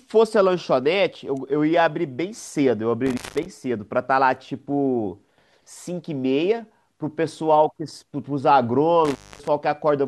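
At 3.06 s the speech drops out abruptly, with crackle at the start and end of the gap and only faint hiss between, until it returns at 3.46 s, the line staying open for about 0.18 s. The same happens again from 9.05 s to 9.48 s, this time open for about 0.25 s. This is an intermittent contact: a loose cable or plug briefly breaks the signal path, and the scraping contact produces the crackle at each edge.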